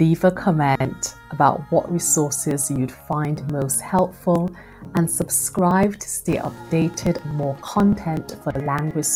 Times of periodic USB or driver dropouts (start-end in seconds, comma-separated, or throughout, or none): 2.51-9.03